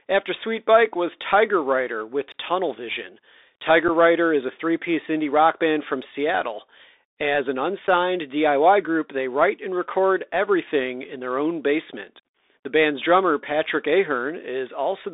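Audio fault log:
Throughout: Bluetooth CVSD headset codec. The speech passes through a narrow telephone band of roughly 300 Hz to 3.7 kHz, so it sounds thin and boxy. The codec sends one bit per sample, saying only up or down, with an adapting step size. That fits a 64 kbps stream. Sharp, loud high sounds outrun the step and smear. S sounds turn scratchy. A fine granular hiss sits under the speech, and the damage is plainly audible.
3.88 s and 7.88 s: unconcealed Bluetooth headset packet loss. At each point about one packet of voice data went missing between headset and phone. Each hole lasts about 7.5 ms. Nothing was done to hide the gap, so the speech simply drops out and resumes with abrupt edges. Because this is a CVSD link, the speech comes back quieter for a moment as the step size rebuilds.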